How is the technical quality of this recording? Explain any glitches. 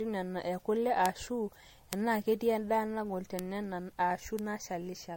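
The speech is degraded throughout and has four isolated clicks.

Generation loss runs throughout. The sound is swirly and hollow, with blurred attacks and nothing above 16.7 kHz. This is likely from about five successive MP3 encodes near 62 kbit/s, each adding fresh quantisation damage. That makes it worse than a single encode at that rate would sound.

Bit error spikes occur at 1.06, 1.93, 3.39 and 4.39 s. Each is one sharp broadband tick where a flipped bit makes a sample or two jump and return. Unlike codec artefacts, these ticks are unrelated to the speech.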